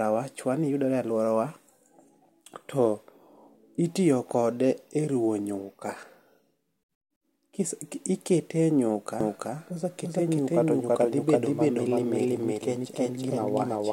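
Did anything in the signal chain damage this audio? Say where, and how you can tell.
Yes. A doubled audio track appears at 9.21 s and runs to the end of the speech clip. From that point a second, full-band copy trails the original by roughly a third of a second at about the same level, with no decay or room colouring, and it cuts in abruptly. The cause is likely in the capture or driver stage, where the same feed is picked up again through a slower path, or an edit holds two out-of-step copies.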